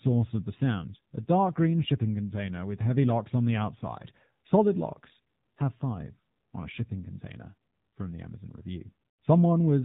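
AMR narrowband mobile codec damage runs throughout: nothing above 4 kHz survives, and the buzzy, synthetic, pulse-driven speech fits a low mode near 7.4 kbps.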